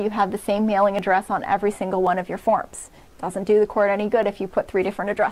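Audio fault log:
0.99–5.31 s, clock drift buffer slips: a short click recurs about every 1.08 s, roughly five in all. Likely cause is two free-running clocks differing by several hundred ppm, so the buffer periodically drops or repeats a few tens of samples, breaking the waveform each time.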